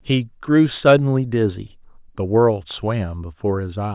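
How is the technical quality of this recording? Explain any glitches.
No audible technical faults here.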